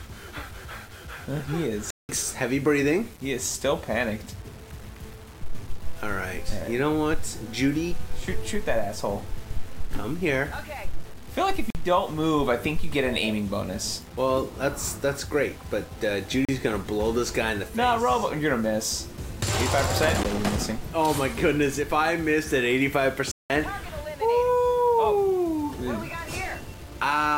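All the way through, there's a grainy distortion riding on the sound, only roughly 25 dB under it, and it gets grittier on the quiet bits. That's low bit depth without dither, likely plain rounding down to something like 7 bits.

Then there are blocks of digital silence: 1.90 to 2.09 s (186 ms), 11.70 to 11.75 s (46 ms), 16.45 to 16.49 s (36 ms), a short tick at 20.23 s (13 ms), and 23.31 to 23.50 s (186 ms). Each one cuts hard to silence and back. The two long ones fit an 8192-sample buffer going unfilled.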